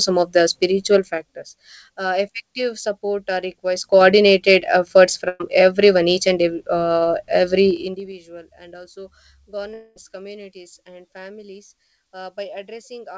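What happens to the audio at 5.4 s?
A burst of packet loss runs from 5.28 to 5.42 s. Several packets in a row arrived too late or not at all. The receiver stretched the last sound over that gap, fading it as it went. Playback then resumes further on, with about 120 ms of speech missing.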